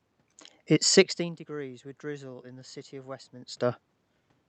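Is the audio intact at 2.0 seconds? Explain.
Yes, the audio at 2.0 seconds is intact, with only the room noise and the ordinary coding character of the call path present there.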